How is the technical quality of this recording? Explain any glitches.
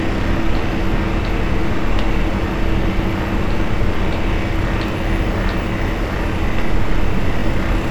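The recording has one recurring glitch, overlapping chunks, at 2.36–2.38 s, 4.88–4.90 s and 7.40–7.42 s. Each 2.5 s block begins 20 ms before the previous one ends, so that sliver plays twice, giving a brief stutter. Unlike a dropout, nothing goes missing. The sound repeats, at a steady interval of about 2.5 s.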